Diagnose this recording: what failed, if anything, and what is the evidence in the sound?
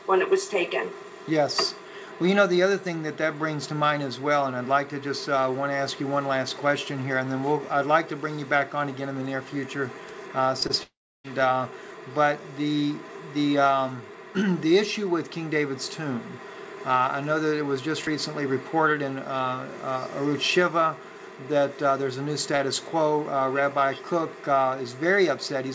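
Network stage, short concealed packet loss: brief smears at 10.60 s and 10.67 s, each about 20 ms of missing audio patched by extending the preceding sound.

Network stage, long network dropout: from 10.83 s the sound trails off as a fading buzz or hiss, then about 0.3 s of silence until 11.26 s. Roughly 0.4 s of audio was likely lost in a network outage.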